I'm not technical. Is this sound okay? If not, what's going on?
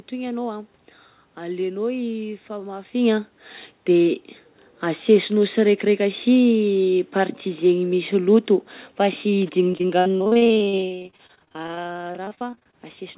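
No. Repeated packet loss from 9.72 to 12.75 s: parts of the call kept going missing and were patched over, making the speech choppy and robotic.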